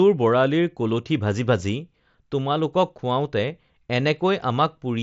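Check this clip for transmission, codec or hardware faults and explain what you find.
No transmission, codec or hardware faults can be heard.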